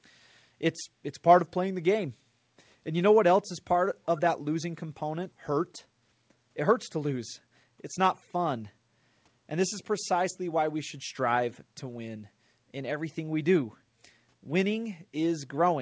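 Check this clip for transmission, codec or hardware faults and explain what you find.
Two faults are audible in this speech clip, close together. The audio is band-limited to 8 kHz, which fits a G.722 call codec at around 64 kbps.

Skip ahead, at 5.32 to 5.34 s. Playback jumps forward with no gap filled in. Roughly 0.7 s of speech is gone. A stretch of audio was dropped while later audio was already queued, then the two sides were joined almost directly. You hear an abrupt cut, with speech resuming mid-flow.

Jitter buffer speed-up, from 5.50 to 7.98 s. Speech runs at 107% speed while the pitch stays the same. The buffer was holding more audio than its target, so the receiver trimmed many short pitch-period pieces in a row. About 0.2 s was removed in total. This stretch sounds slightly hurried, just after the skip.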